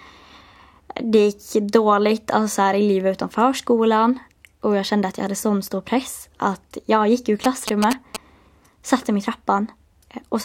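A galloping dit-dit-dit of short buzzes breaks into this speech recording from 7.44 to 8.17 s, just after "att jag gick ur", sitting only a little below the voice. These are GSM signalling bursts: a nearby 2G phone's radio pulses, repeating at about 217 Hz, rectified by the audio circuitry.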